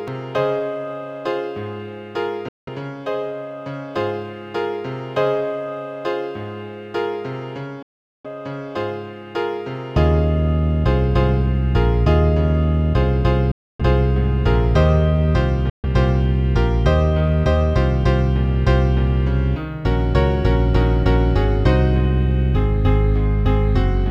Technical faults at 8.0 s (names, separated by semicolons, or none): Bluetooth dropout